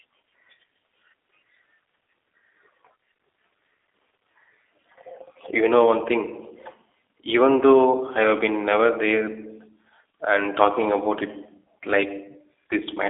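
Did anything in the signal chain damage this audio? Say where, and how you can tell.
Yes, the codec stage: throughout, it sounds like G.729, with nothing above 3.7 kHz and a rough, synthetic buzz from pulse-based rebuilding, which fits about 8 kbit/s.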